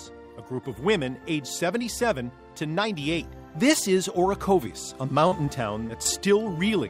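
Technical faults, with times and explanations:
5.27–5.34, 5.46–5.49, 5.87–5.91 and 6.03–6.07 s: short concealed packet loss. About 40 ms, then three 20 ms stretches, arrived too late to decode. The receiver extended the preceding sound to bridge each hole, leaving brief smears or wobbles rather than the silent gaps of a plain dropout.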